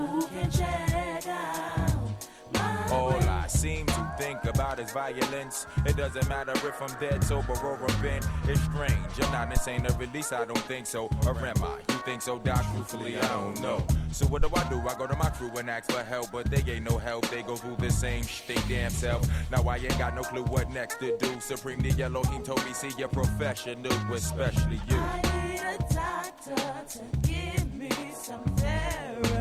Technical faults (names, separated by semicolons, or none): phantom power thump